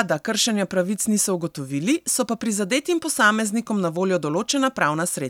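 No technical faults are audible anywhere in the recording.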